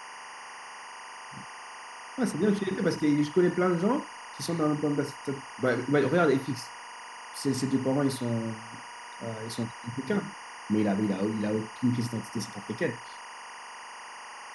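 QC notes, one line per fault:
Throughout, timecode bleed: a steady chirping warble sits roughly 15 dB below the speech, as linear timecode running at 24 frames per second leaks in from an adjacent track or cable, its square wave flipping between tones near 1 and 2 kHz.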